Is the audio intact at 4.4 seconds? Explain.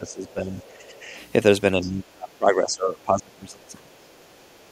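No. From 4.41 to 4.46 s, a brief scrap of a second voice sits far below the main speech, very faint, for only about 50 ms. This is the other side's voice leaking through, likely because the talker's loudspeaker playing the other side reached the microphone and the echo canceller left a residue. Unlike room reverberation, which is a smeared tail of the talker's own speech, this fragment comes from a different voice.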